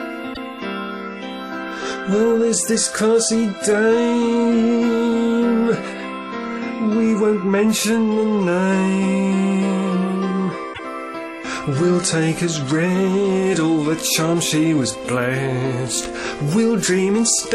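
A short run of compressed frames was delivered twice, so the decoder replays it: at 0.33 s a 78 ms block, which fits three frames, repeats once; at 10.73 s a single 26 ms frame does. Each repeated frames event is a brief stutter, and the audio runs that much longer.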